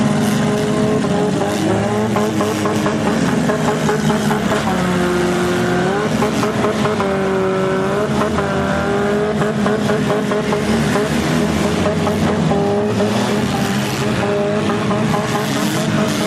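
No technical faults can be heard anywhere in the audio.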